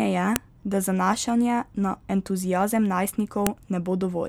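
At 0.36 s and again at 3.47 s, a sharp, loud snap cuts through the speech: a file header played as audio. Separate WAV pieces were joined without stripping their headers, so those bytes play as samples. Unlike a dropout click, each snap marks a piece boundary, whatever the speech is doing.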